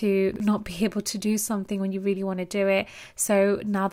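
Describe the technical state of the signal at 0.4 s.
At 0.4 s the speech has just come through a brief jumbled stretch running from 0.32 to 0.40 s, right before "not be". The garble comes from chunks out of order: within that 80 ms span, one 40 ms chunk arrived a chunk late and plays after the one that should follow it. No audio is missing, but the swapped order leaves three hard joins, heard as a scrambled moment.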